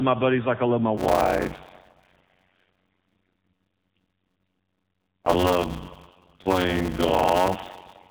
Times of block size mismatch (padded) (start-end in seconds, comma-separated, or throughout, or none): 0.97-8.11